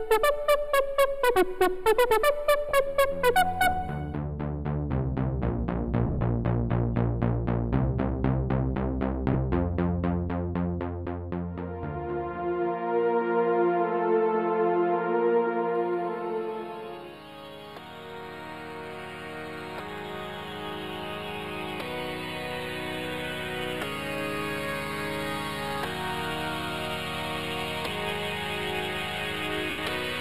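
One channel runs a few samples late, a small fraction of a millisecond, and the two are summed to mono. This channel delay causes comb filtering: cancellation starts around 7 kHz, leaving the top end hollow and phasey throughout.

Lost LE Audio frames occur at 2.69–2.71 s, 6.07–6.21 s, 9.33–9.35 s and 29.70–29.78 s. The decoder fills each gap by reusing the last spectrum with scrambled phase. The short 20 ms gaps turn to a brief noisy smear. The 6.07 s loss is scattered, with runs up to about 50 ms. The 80 ms gap near the end fades away toward silence.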